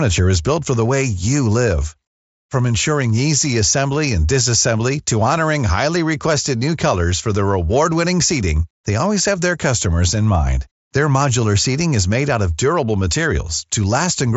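No technical faults can be heard in this speech recording. It comes through a Bluetooth mSBC headset codec, so nothing sits above about 7.7 kHz and loud passages carry a light grain.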